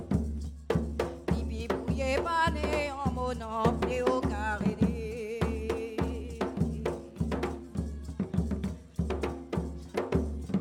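No faults are audible anywhere in the audio.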